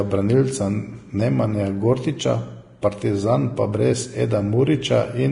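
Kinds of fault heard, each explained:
Vorbis compression: The speech sounds hissy and grainy, consonants smear at their onsets, and nothing is heard above 10.6 kHz, which leaves the top end dull. The heavy damage is likely from low-quality Vorbis coding, consistent with a bitrate around 31 kbps. At that setting the encoder keeps only a smooth spectral envelope for the upper band and quantises the detail above it so coarsely that the fine structure comes back as noise.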